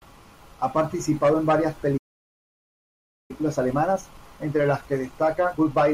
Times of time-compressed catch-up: 3.31-5.93

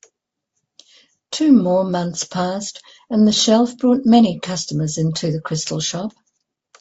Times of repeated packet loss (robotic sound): none

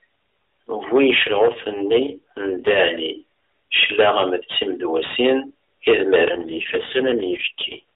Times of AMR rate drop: 1.28-2.82, 6.32-7.83

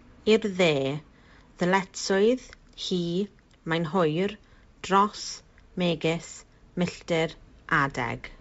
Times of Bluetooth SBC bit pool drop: none

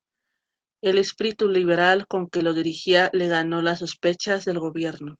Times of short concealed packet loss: 2.37-2.41

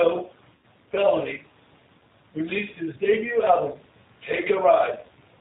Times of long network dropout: none

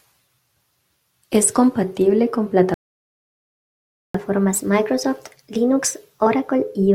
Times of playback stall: 2.74-4.14

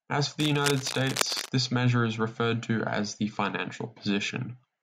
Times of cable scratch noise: 0.40-1.49

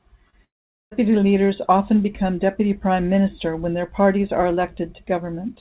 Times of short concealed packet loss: 0.30-0.37

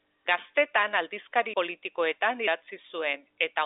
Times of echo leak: none

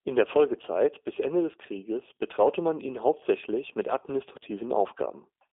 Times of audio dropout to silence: none

